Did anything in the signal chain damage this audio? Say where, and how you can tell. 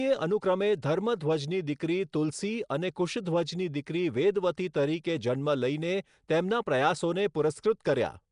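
Yes. Damage comes from the codec stage throughout: a rough, hissy halo and smeared, underwater colouring, with nothing above 10.6 kHz. This is Nellymoser compression, likely Nellymoser Asao at a rate near 44 kbps, which starves weak bands of bits and fills them with noise. A spectrogram shows a hard 10.6 kHz ceiling and grainy noise patches.

Pre-echo, also from the codec, appears at 2.69 s: a short hiss about 10 ms long leads a sharp attack. Quantisation noise sized for the loud onset spreads across its block into the quiet moment before it. The waveform shows low fuzz ahead of the transient, and the spectrogram shows a brief broadband smear.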